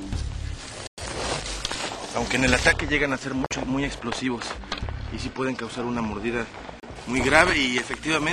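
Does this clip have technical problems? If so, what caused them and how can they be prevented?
Yes. The sound cuts to silence at 0.87 to 0.99 s, 3.46 to 3.54 s and 6.80 to 6.84 s, then resumes as if it had kept playing. This is likely a Bluetooth dropout: late packets were discarded. Keep the source close and clear of interference.

From 2.73 to 6.96 s the treble falls away smoothly. At 10 kHz it is about 14 dB below 1 kHz, so the sound turns dull. This is de-emphasis applied wrongly. A treble cut meant to undo pre-emphasis hit audio that lacked it, or was applied twice. Match the de-emphasis setting to the source.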